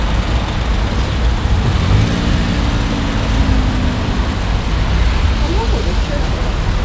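No faults are audible in these sounds, which come through a working call path whose content stops at about 8 kHz, consistent with a wideband codec such as G.722.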